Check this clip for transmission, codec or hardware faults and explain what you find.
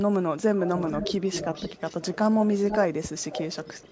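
One fault is present: echo leak, at 0.55–2.18 s, 2.4–2.79 s and 3.18 s to the end. A copy of the speech trails it by about 480 ms, strongest in the middle stretch and faint at the end. This is likely loudspeaker pickup that the far side's echo canceller left unremoved.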